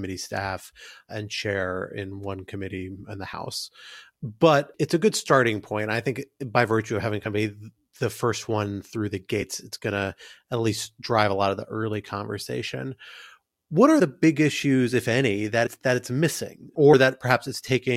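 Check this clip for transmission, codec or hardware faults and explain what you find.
The clip has one problem, compressed frames skipped, five times: at 0.84 s (just before "and chair"), 3.32 s, 7.25–7.27 s (between "by virtue of having" and "of a the first"), 15.65–15.68 s (between "issues if any that" and "that it's"), and 16.92 s. Whole coded frames went missing or were rejected by the decoder, so the speech jumps ahead by roughly a twentieth to a tenth of a second.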